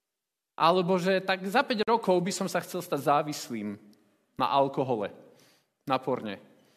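At 1.83 s the sound drops out abruptly for about 46 ms, resuming at 1.88 s exactly where it left off, with both edges of the silence blurred rather than razor-sharp. This is a gap at a join of encoded pieces: two separately encoded segments were butted together without trimming, so the encoder's start-up delay and the padding in the final frame of the earlier piece survive as a short hole in otherwise continuous audio.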